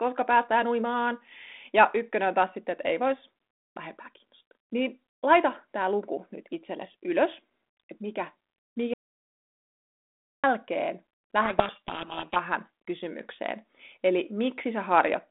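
At 8.94 s the input feed was most likely lost, perhaps through a dropped link or a stray mute, while the recorder kept writing silence. This audio dropout to silence cuts the speech off abruptly for 1.5 s, until 10.44 s, leaving dead silence with no room tone beneath it.

From 11.42 to 12.37 s the receiver reads the G.726 code words with their bits in the wrong order, a codec payload misread. The decoder turns these scrambled values into harsh, rasping distortion that buries the speech, and the sound stays narrow-band, limited to about 200 Hz to 3.6 kHz by the 32 kbit/s telephone path.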